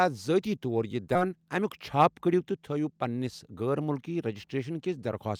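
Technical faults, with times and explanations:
1.15 to 1.17 s, skip ahead: playback jumps straight past roughly 0.7 s of speech, and the two sides are butted together with no fill or silence in between, so the sound lurches forward mid-flow. A block of later audio had already arrived and was queued, and the missing stretch was discarded, either lost in transit or thrown out by an overflowing jitter buffer. The listening delay therefore drops by about the same 0.7 s in one step.
1.25 to 3.62 s, jitter buffer speed-up: right after the jump the speech runs at about 111% of normal speed while keeping its pitch, so it sounds rushed rather than higher. The receiver's buffer was holding more audio than its target, so it repeatedly cut out tiny slices one or a few pitch periods long. Over this span those cuts add up to around a third of a second, which pulls the delay back toward normal.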